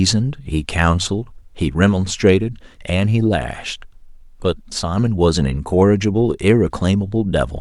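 No audible technical faults present.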